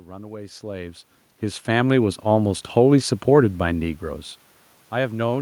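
From 1.64 to 3.06 s the automatic gain rising is audible: the gain control judged the input too quiet and raised its gain by about 5 dB over roughly 1.4 s, so the speech and the room noise swell together.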